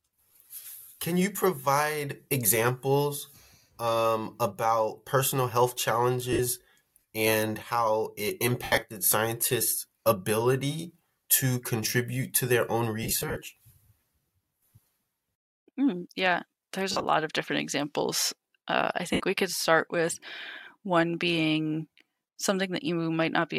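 Brief noisy smears replace the speech at 6.33 s, at 8.64 s between "and how it" and "scientists ability to contribute", at 13.03 s, at 16.92 s between "mm yeah there's" and "of different examples", and at 19.13 s just before "we could start with". These are lost LE Audio frames: the LC3 decoder filled each gap (60 to 158 ms, often in scattered runs) by repeating the last spectrum with random signs.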